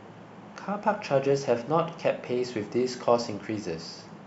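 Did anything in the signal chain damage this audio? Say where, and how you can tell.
No, nothing in the chain has damaged this speech recording. No stage from capture to playback leaves any audible mark on the signal.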